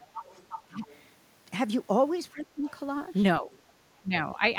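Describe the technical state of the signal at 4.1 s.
At 4.1 s the speech dips sharply, sinking by around 15 dB at its deepest between 4.02 and 4.42 s. This is speech suppressed in double talk, likely an echo canceller that turned down the near talker along with the echo while the far side spoke.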